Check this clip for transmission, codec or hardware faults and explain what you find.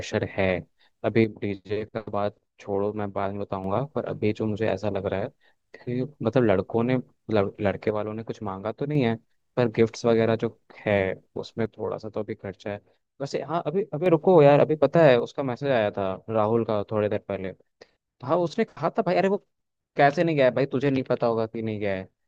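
One fault recurs four times. The speech abruptly drops about 6 dB from 1.24 to 3.64 s, 7.91 to 8.95 s, 11.66 to 14.06 s, and 15.2 s to the end. The likely cause is one channel dropping out before the mono sum.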